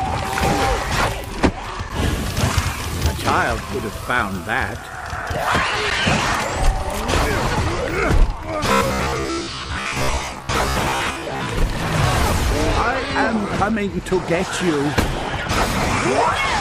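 From 8.72 to 11.48 s the sound collapses into robotic sound from repeated short buffers, a rigid metallic buzz at 66.7 Hz that still loosely tracks the original. The likely cause is audio arriving too slowly, so playback loops the last chunk of roughly 15 ms, covering about half the passage. A spectrogram shows evenly spaced harmonic lines every 66.7 Hz and vertical striping; the waveform repeats identical 15 ms blocks.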